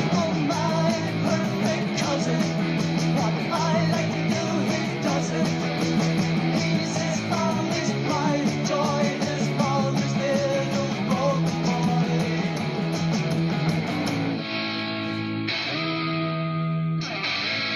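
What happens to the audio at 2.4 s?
Nothing goes wrong at 2.4 s; the audio plays through that moment intact, with no dropout, click or other fault.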